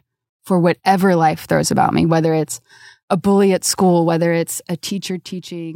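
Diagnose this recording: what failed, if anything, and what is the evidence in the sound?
Zipper noise from 4.04 to 5.53 s: a roughly 15 dB fade in the gain stage is applied in unsmoothed steps, about twenty per second, each ticking audibly.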